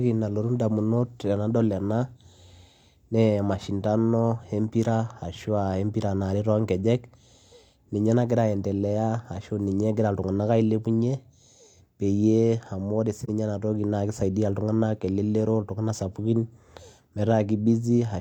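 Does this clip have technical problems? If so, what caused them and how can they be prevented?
Yes. AAC frame loss with muting at 13.24–13.29 s: a 43 ms gap, fitting a single lost frame, where the decoder zeroed the spectrum and overlapping windows faded the speech softly out and back. Protecting the stream with retransmission or forward error correction would prevent it.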